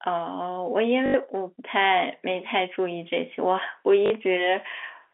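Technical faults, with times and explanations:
1.06–1.14 s and 4.06–4.10 s, packet loss with last packet repeated: 80 ms and 40 ms gaps get filled by replaying the last packet, so you hear a short robotic stutter.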